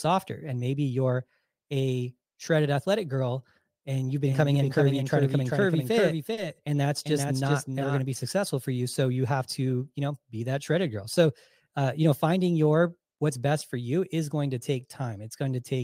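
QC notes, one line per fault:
4.26–8.00 s, doubled audio track: after "athletic girl and you've", a dry full-band copy trails about 0.4 s behind, roughly 5 dB down, cutting off abruptly before "to be successful for"; likely a second capture path.
6.33 s, short concealed packet loss: about 40 ms went missing and got patched by extending the previous sound, so you hear a quick smear there.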